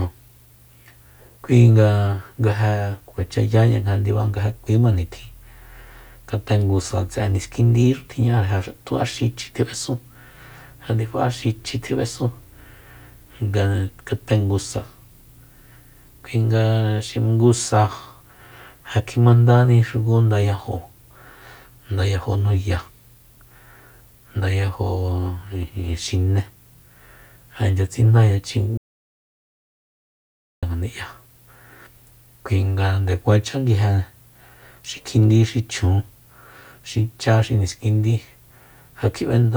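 A speech recording with an audio dropout to silence from 28.78 s to 30.63 s, wiping out about 1.85 s of the speech. The sound stops abruptly mid-flow and resumes just as abruptly. Unlike a natural pause or a noise gate closing, the gap holds no room tone or hiss at all, only silence. That points to the input being lost, likely through a disconnected device, a failed link or a stray mute, while recording continued.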